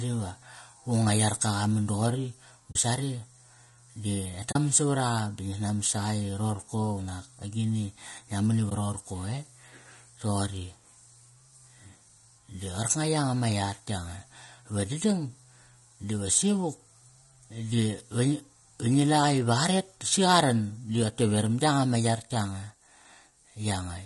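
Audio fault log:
throughout: low-delay AAC compression. The speech sounds rough and grainy, with noise filling the gaps between harmonics, likely from AAC-ELD coding at a rate that fits about 32 kbps. Its short frames resolve pitch poorly. A spectrogram shows smeared harmonics and a thin, patchy top band.
2.71–2.76 s, 4.51–4.56 s, 8.69–8.72 s: AAC frame loss with muting. There are soft-edged dropouts of 40 ms, 40 ms and 20 ms. Missing frames decode as silence, and overlapping windows fade the sound out and back in. The waveform tapers into gaps at the two-frame losses and a brief dip at the single one, and the spectrogram shows blank vertical strips.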